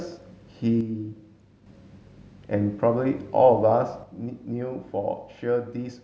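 From 0.81 to 1.66 s and from 4.03 s to the end, the speech drops abruptly by about 6 dB, likely one channel dropping out, showing as sudden step-downs in waveform amplitude.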